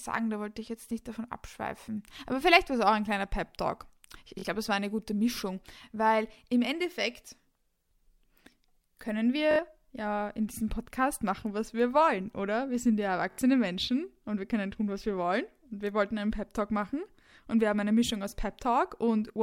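Bluetooth stutter: the wireless link dropped or delayed audio packets, so the receiver replayed its last buffer, giving a brief buzzing repeat at 4.39–4.45 s before "glaube es war eine", 9.51–9.60 s before "ja in diesem", and 13.31–13.39 s after "sind ja". Each skips ahead about 43, 64 and 64 ms, which fits two or three lost packets.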